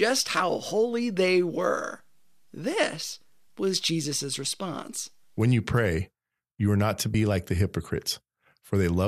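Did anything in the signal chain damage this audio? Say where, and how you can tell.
Yes. The damage is in the compressed stream, at the codec or storage stage: damaged data in a compressed stream at 7.13 s, between "you are not to" and "like the". Corrupted bytes there make the decoder misread those frames and lose sync until it locks onto a later valid frame header. What you hear is a very brief chirp or blip, about 14 ms, cutting into the speech at that point.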